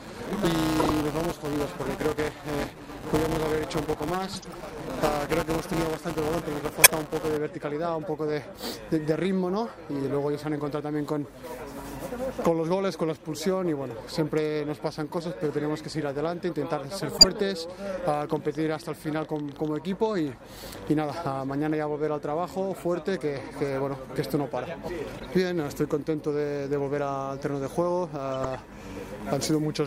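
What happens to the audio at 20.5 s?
At 20.5 s a train of clicks runs from 18.08 to 21.10 s. About 11.3 irregular pops per second, near signal level, likely from electrical interference.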